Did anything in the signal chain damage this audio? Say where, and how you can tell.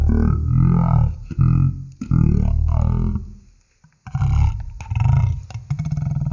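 Yes, at the playback stage. The speech runs at one third of its proper speed for the whole clip, and its pitch sits about 19 semitones low. Voices come out deep, dragged and slurred. Speed and pitch fall together by the same ratio, with no change in timbre balance from processing. That is a wrong sample rate. The samples were read out at a slower clock than they were captured with, with no conversion. A threefold drop fits 48 kHz material played as 16 kHz.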